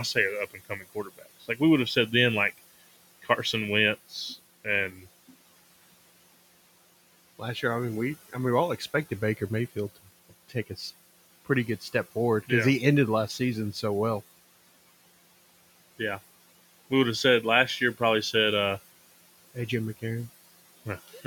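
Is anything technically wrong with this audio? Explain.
Yes. Noise suppressor artifacts run through the whole clip. The background, which sits about 20 dB under the speech, is pushed down by about 17 dB in the pauses and comes back up beneath each phrase, so the noise floor pumps with the talking. The changes track the speech frame by frame and the residue shifts band by band, which sets this apart from a simple noise gate that just switches the whole signal on and off.

There is also speech cut by the noise suppressor. Between 0.51 and 1.6 s, after "say are up" and before "we would have said", parts of the speech drop by as much as about 17 dB, adding up to a little under half a second. At 4.91–5.06 s a shorter stretch sinks by about 7 dB. The suppressor took these quieter speech parts for noise and turned them down with the background, so they sound swallowed and faint. Unlike a dropout, the sound never falls to hard silence with an abrupt edge.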